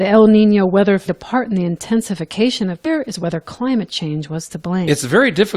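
At 1.06 s and again at 4.87 s the speech gets a quick blip from damaged data in the compressed stream. Bad bytes there throw the decoder off, so it misreads those frames and loses sync until it finds the next frame header.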